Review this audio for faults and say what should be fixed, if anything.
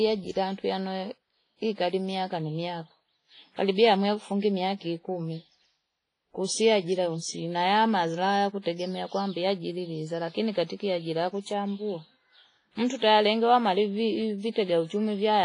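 Throughout the speech there is ringing, washy smearing and a hiss that swells and fades with the signal, with nothing above 10.4 kHz. This is likely WMA compression at a low bitrate, which fits about 24 kbps: long transform blocks spread quantisation noise across tens of milliseconds and weak spectral lines are zeroed. On a spectrogram this shows as a flat ceiling at 10.4 kHz, blurred onsets and patchy holes between harmonics. Re-encode from the original source with a modern codec at a higher bitrate.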